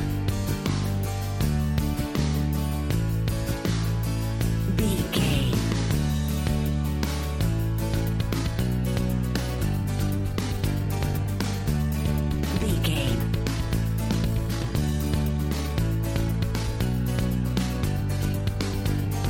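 From 7.87 s to the end at 19.30 s, the sound suddenly turns rushed while its pitch stays put, running about 1.46 times faster. This time-stretched section likely comes from software squeezing the audio to fit a length by dropping short pieces.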